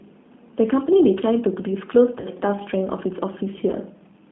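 Speech carried over a narrowband VoIP link, coded throughout with the G.729 codec; the roughness fits the 8 kbit/s G.729A variant. The coder models each 10 ms frame as a vocal tract filter plus a pitch predictor and a few pulses, so the speech comes through intelligible but plainly rough and slightly synthetic. The line passes only about 150 Hz to 3.5 kHz, so the audio sounds thin, without low body or upper brightness. Twice the link drops audio and the speech decoder conceals the VoIP packet loss. The first gap, 40 ms long, which points to two lost 20 ms packets, comes from 2.20 to 2.27 s. The second, 20 ms long, which fits a single lost packet, comes from 3.71 to 3.76 s. In each case the decoder extends the last pitch and filter while lowering the gain, so the speech smears into a short, fading buzzy tone or coloured noise. Because each frame builds on the previous one, the speech stays weakened and distorted for a moment after the packets return.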